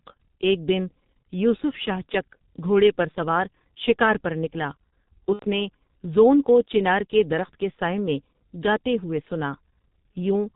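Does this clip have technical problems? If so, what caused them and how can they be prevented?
Yes. The whole clip carries heavy G.723.1 codec damage. Nothing is heard above 4 kHz, so the speech is muffled, and the coarse 30 ms frames with a slowly updated voice model leave it hoarse, with smeared consonants. That sound fits the 6.3 kbit/s mode. Unlike plain low-pass filtering, which only dulls the top end, this roughness and frame-rate graininess come from the codec itself. Using a wideband codec such as Opus at an adequate bitrate prevents it.

From 5.33 to 5.45 s there is VoIP packet loss concealed by the speech codec. The decoder extended its last pitch and filter state, so the sound stretches into a fading tone or noise that is muted on the third lost frame, rather than a click. The length fits about three lost 30 ms frames. Because each frame builds on the previous one, the voice stays weak briefly after the gap. 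A jitter buffer with forward error correction or redundancy on a stable network prevents it.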